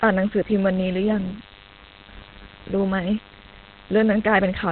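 DECT cordless phone buzz runs throughout the speech. A nearby DECT handset or base transmits a radio burst every 10 ms, and the audio circuitry rectifies it into a thin, steady 100 Hz buzz rich in harmonics, sitting roughly 25 dB below the speech.

Opus compression is the likely cause of the heavy damage heard throughout. Nothing remains above 4.3 kHz, so the speech sounds narrowband, muffled and hoarse. That points to the codec's speech mode at a very low bitrate, around 12 kbps, discarding the upper band.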